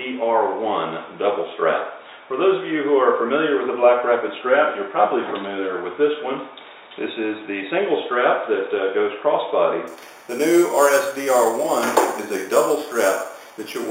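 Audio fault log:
9.87 to 13.91 s, imaging from sample-and-hold upsampling: metallic fizz at about 16 dB below the sound, filling 4 kHz to 8 kHz, fitting 8 kHz audio repeated sample by sample up to 44.1 kHz. Unlike hiss, it tracks the sound's level and moves opposite to its pitch.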